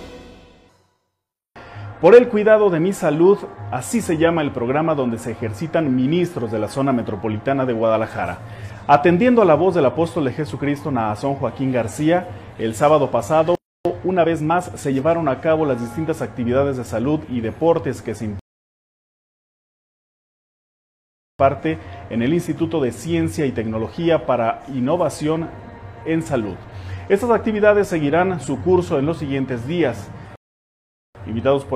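At 13.55 s the sound stops dead for about 0.3 s, likely a playback stall where the player starved or its thread blocked, rather than a gap in the source. From 13.85 to 15.05 s a time-compressed catch-up plays the backlog at 1.25 times speed by cutting out small pieces. It is hurried, but the pitch stays normal, unlike simple speed-up. Rebuffering stalls follow at 18.39 s, lasting 3.0 s, and at 30.36 s, lasting about 0.8 s. In each, the download ran dry, the sound fell silent and then resumed exactly where it stopped. Nothing is skipped and there is no catch-up afterwards, only added time.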